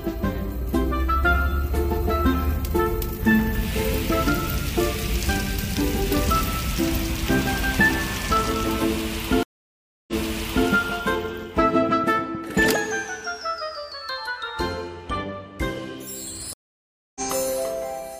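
At 9.43 s the stream reconnect begins. The connection drops, about 0.65 s of silence follows, and a fresh decoder picks up again by 10.68 s with the first frame fading in. Playback restarts 0.6 s earlier than where it broke off, so a stretch of audio repeats, as when a server resends a burst. A second reconnect at 16.53 s goes silent for 0.62 s and resumes by 17.21 s, this time skipping ahead by roughly 0.4 s. A plain buffer underrun would pause and carry on from the same point. Here each gap moves the timeline, backwards at the first reconnect and forwards at the second.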